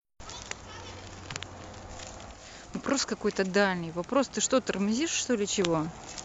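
At 2.28 s the speech shows digital radio blending to analogue: the receiver lost the digital stream and cross-faded over about 180 ms to the FM broadcast, dropping the level by about 5 dB and adding faint hiss roughly 35 dB down, before blending back at 5.63 s.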